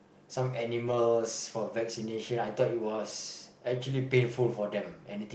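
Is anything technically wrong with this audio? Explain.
Yes. From 0.87 to 0.97 s there is a lost packet rebuilt from error correction. The decoder filled about 60 ms, consistent with three lost packets, using low-bitrate copies from the following packets. There is no gap, just a briefly rougher, noisier stretch rather than the buzzy repetition of concealment.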